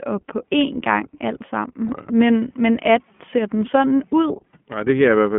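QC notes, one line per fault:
Throughout: iLBC codec. The speech is confined to a narrow telephone band, roughly 150 Hz to 3.4 kHz, so it sounds thin and boxy, with a plainly audible rough, slightly synthetic edge from the coarse excitation coding. The character fits iLBC's 15.2 kbps mode with 20 ms frames. On a spectrogram, energy stops sharply at 3.4 kHz with nothing above, and there is a clean gap below 150 Hz. Harmonics look smeared and grainy rather than crisp.
1.88–1.91 s: lost iLBC frames. A single packet of about 20 ms went missing, which fits one lost frame. The decoder covered it by repeating the last pitch cycle blended with noise, so a brief held, faintly buzzy vowel-like tone replaces the real sound. Because each iLBC frame decodes independently, the voice snaps back to normal immediately afterwards. On the waveform, near-repeating periods overlaid with noise appear across the gap. 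On the spectrogram, the harmonics are frozen flat with a noisy haze.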